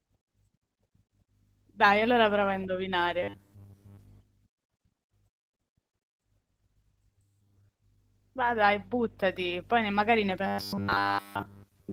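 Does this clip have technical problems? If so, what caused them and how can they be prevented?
Yes. Throughout, the speech has a coarse, slightly hoarse and robotic quality from Opus voice compression. The codec here runs SILK's linear-prediction coding for the lower band with a CELT layer above 8 kHz, and the audible damage points to a low bitrate of around 16 kbps, leaving the excitation coarsely coded. Raising the bitrate would prevent this.

From 3.23 to 3.99 s, and again from 10.47 s to the end, the sound turns into a rigid metallic buzz at 100 Hz, which is robotic sound from repeated short buffers. The likely cause is audio arriving too seldom, so the software kept replaying a segment that fits a 10 ms buffer. In the first stretch most of the real audio was skipped in favour of repeats, and in the second all of it was. Enlarging the jitter or playback buffer, or fixing the delivery stall, would prevent it.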